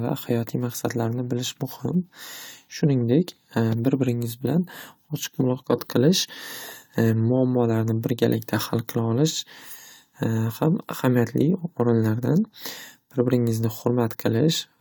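No technical faults can be heard at any point in the speech.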